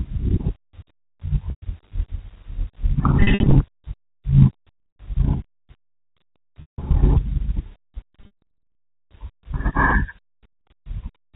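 Packet loss with pitch repetition occurs at 1.5–1.62, 3.21–3.55, 4.78–4.96, 6.61–6.78, 8.21–8.42 and 10.52–10.66 s. Missing speech is bridged by repeating the last pitch period, giving brief buzzy, held tones that fade out over the longer gaps, all within the G.711 telephone band's 4 kHz ceiling.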